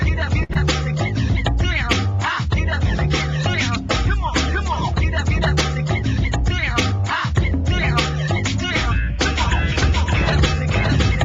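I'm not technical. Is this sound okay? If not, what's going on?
No. A short stall from a late packet at 0.43 to 0.51 s: a piece of the stream arrived late, so the player stretched the last sound for about 0.06 s, then carried on.

Right after, a short concealed packet loss at 0.53 to 0.57 s: about 0.02 s never arrived, and the player covered the gap by extending the preceding sound, causing a brief smear.

From 9.41 s to the end there is a doubled audio track: a second, somewhat quieter copy of the same sound follows about half a second behind, likely from a second, slower recording path or an edit holding two out-of-step copies.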